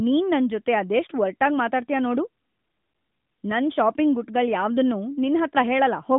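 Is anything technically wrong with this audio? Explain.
No, nothing is technically wrong with this audio.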